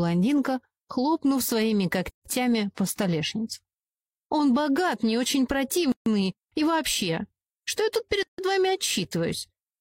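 At 2.10 s, 5.92 s and 8.23 s the sound drops out for 159, 143 and 157 ms: a gap at a join of encoded pieces, where encoder start-up silence and end padding were left in. Waveform and spectrogram show empty bands with smeared edges; the sound then resumes unchanged.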